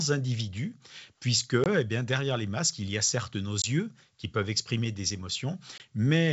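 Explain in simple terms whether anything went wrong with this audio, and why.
Packet loss on an ADPCM call shows up three times: at 1.64 to 1.67 s, between "individu puisque" and "bien derrière les masques"; at 3.62 to 3.65 s, between "y a certes nos" and "qui peuvent exprimer des"; and at 5.78 to 5.81 s. Each time about 20 ms of sound, roughly one packet, never arrived and became a sharp-edged gap of silence. The decoder works by predicting each sample from the ones before it. After the gap its guesses no longer match the sender's, so the speech comes back briefly slightly distorted before settling.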